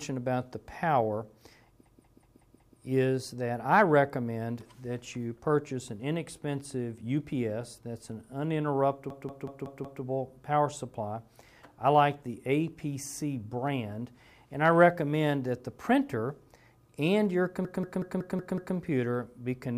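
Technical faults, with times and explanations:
1.86–2.79 s, 9.10–10.03 s, 17.65–18.76 s, system hang loop: a 0.19 s piece repeats exactly five, five, then six times at 5.38 Hz, fitting an 8192-sample buffer, giving a machine-gun stutter. The identical repeats, not silence, set it apart from dropouts, and little audio goes missing afterwards.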